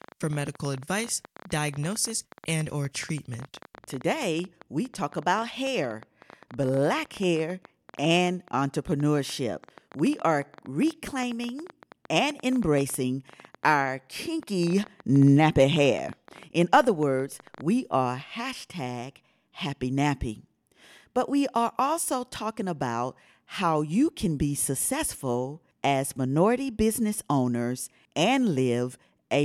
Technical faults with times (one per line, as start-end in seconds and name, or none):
0.02-17.62 train of clicks